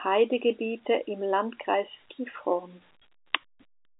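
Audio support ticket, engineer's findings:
No faults found in playback.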